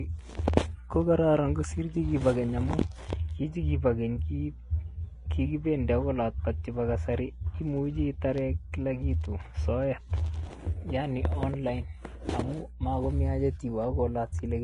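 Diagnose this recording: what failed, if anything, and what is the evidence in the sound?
The codec stage is where this speech recording failed: it was most likely squeezed through Vorbis compression at a low setting, one that fits a bitrate of roughly 31 kbps. The encoder strips everything above about 10.5 kHz and quantises the remaining treble so coarsely that fine detail turns into hiss of similar energy. The damage is plainly audible throughout, with a grainy, hissy top end, roughened tone and softened consonant attacks.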